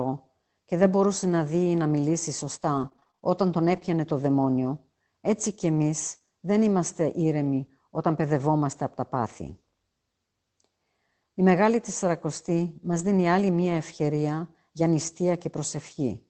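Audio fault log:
2.73 to 6.27 s, scattered short gaps: about ten tiny dropouts are sprinkled through this stretch, none longer than roughly 20 ms, adding up to around 200 ms. The receiver papered over each by stretching the previous sound, so you get little ticks and smeary hiccups rather than silences.
12.91 to 13.09 s, lost packet rebuilt from error correction: there's no gap here. The decoder played low-bitrate backup copies carried in the following packets, about 100 ms in all, which fits several separate lost packets. That's why this bit sounds rougher and noisier, on top of the Opus call path's usual 8 kHz top end.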